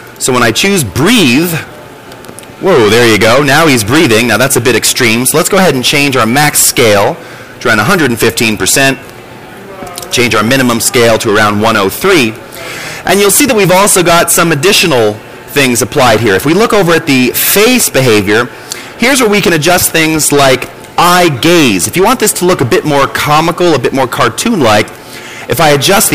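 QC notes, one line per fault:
throughout, hard clipping: the level is pushed about 20 dB past what the stage can pass, so peaks get sliced flat, and on something like a fifth of the samples. At that much overload it's not occasional crackle on the loudest moments. Every loud stretch picks up a harsh, buzzy fuzz, because those squared-off tops throw a pile of extra harmonics way up the spectrum that weren't in the original sound.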